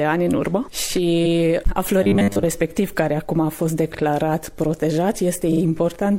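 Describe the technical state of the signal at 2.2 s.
A rigid, metallic buzz pitched at 100 Hz covers 2.03 to 2.45 s: robotic sound, likely from a repeated short buffer of about 10 ms replacing most of the audio.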